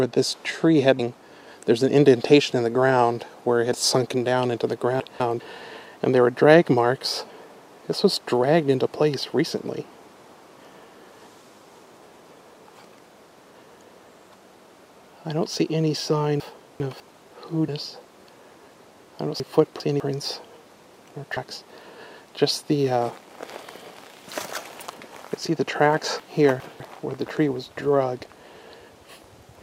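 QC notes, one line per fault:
0.98 s, compressed frames skipped. Roughly half a second of sound is missing. The audio jumps ahead by about twenty 26.1 ms frames, so the join is a short smeared blip, not a click.
3.73 s, compressed frames skipped. A smaller jump of about 70 ms, a few frames. Overlapping frames blur the seam.
17.67 s, compressed frames skipped. About 300 ms is lost, around ten frames.
21.36 s, compressed frames skipped. About 200 ms is gone, with the same soft blip.
5.0 to 5.4 s, chunks out of order. One 200 ms chunk plays one slot late. The sound jumbles briefly.
16.4 to 17.0 s, chunks out of order. A 200 ms chunk lands two slots late. Nothing is lost, but the order scrambles.
19.4 to 20.0 s, chunks out of order. A chunk again plays two slots late, with the same garbled moment.
26.2 to 26.8 s, chunks out of order. A chunk is late by two slots, so the passage jumbles.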